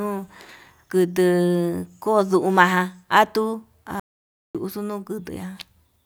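Audio dropout to silence at 4.00 to 4.55 s in this speech recording: the sound cuts to silence for 550 ms, with no room tone, likely from lost input.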